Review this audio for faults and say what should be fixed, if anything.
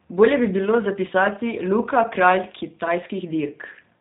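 G.729 codec damage runs throughout: nothing above 4 kHz survives, and the speech sounds rough and synthetic, unlike a plain low-pass filter, which dulls without this buzzy rebuilt quality consistent with an 8 kbit/s codec. To prevent it, record or transmit with a wideband codec, or use the original uncompressed source instead of the telephony path.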